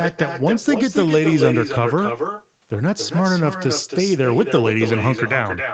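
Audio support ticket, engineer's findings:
Echo with no canceller, present throughout. Each phrase shadowed by a second copy, about 6 dB quieter, trailing roughly a third of a second behind. Probable component: far-end loudspeaker and microphone. Mechanism: far side plays call aloud, its mic recaptures it, nothing cancels it. Copy returns after network round trip.

Band limit at 8 kHz, nothing above. Fits a wideband Opus call path, perhaps near 32 kbps. Expected, not a fault.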